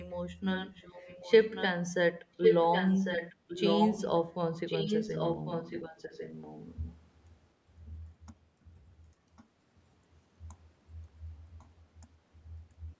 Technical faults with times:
0.55-1.66 echo leak
2.42-4.10 echo leak
4.66-6.97 echo leak
7.86-7.98 echo leak
9.36-9.45 echo leak
11.59-11.66 echo leak

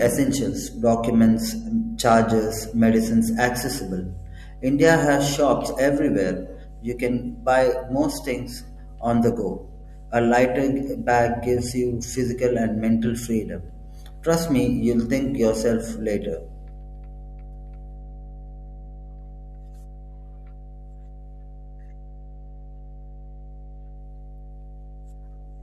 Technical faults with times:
0.00-25.63 mains hum

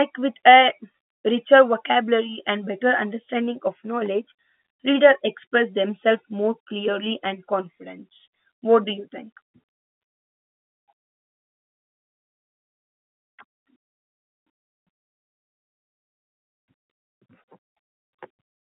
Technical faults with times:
0.92 packet loss with pitch repetition

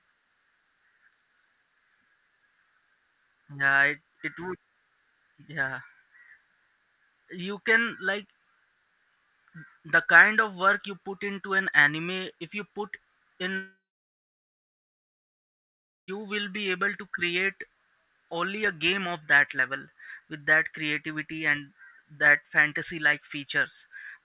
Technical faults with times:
13.58-16.10 long network dropout

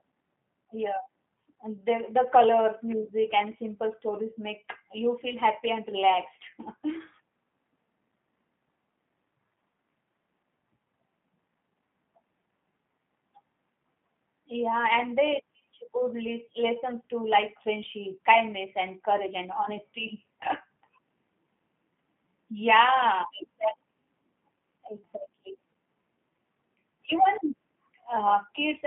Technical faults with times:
0.00-28.87 G.729 codec

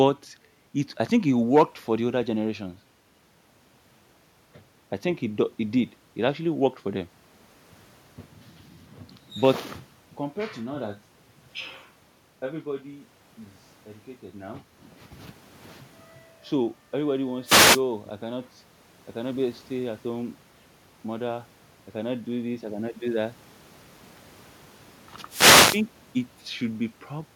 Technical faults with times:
17.44-17.82 wireless microphone noise hit
25.28-25.83 wireless microphone noise hit

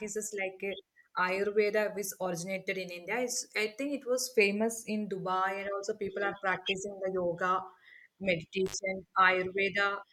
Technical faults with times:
8.66-8.74 intermittent contact

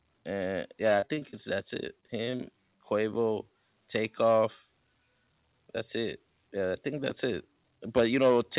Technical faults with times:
1.00-1.55 repeated packet loss (robotic sound)
2.00-2.41 repeated packet loss (robotic sound)

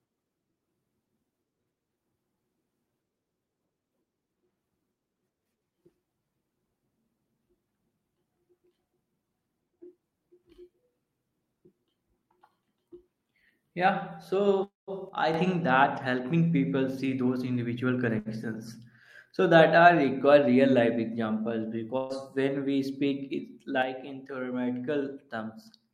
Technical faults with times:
14.63-14.90 call audio freeze
15.09-15.34 one channel drops out
16.76-18.06 jitter buffer speed-up
18.19-18.28 short stall from a late packet
21.97-22.13 burst of packet loss
23.82-25.93 one channel drops out

